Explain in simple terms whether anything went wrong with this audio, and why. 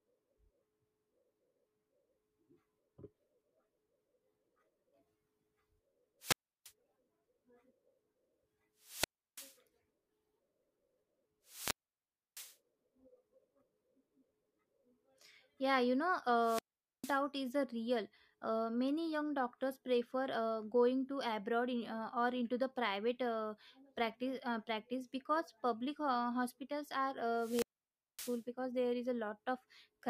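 The speech has wireless microphone squelch dropouts: the radio signal fades, the receiver mutes it, and you hear a hiss, then silence, at 6.20, 8.80, 11.45, 16.40 (after "you know") and 27.34 seconds.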